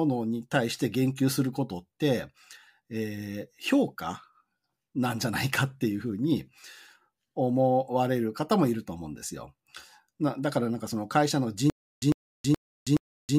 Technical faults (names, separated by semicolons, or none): stutter with silent gaps